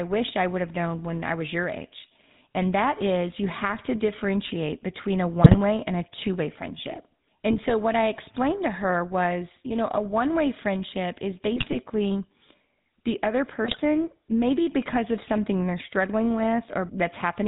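GSM full-rate codec, throughout: the speech has been squeezed through a vocal-tract model driven by regularly spaced pulses, which fits the 13 kbps full-rate coder. Nothing survives above 4 kHz, and the voice carries a plainly audible buzzy, gravelly roughness.

GSM bit errors at 5.42 to 5.57 s, 7.51 to 7.75 s, 11.56 to 11.76 s and 13.65 to 13.80 s: corrupted bits reached the decoder, so wrong filter, pitch or gain values twist the spectrum or spike the level, and the speech breaks into brief squawks, pops and gargling.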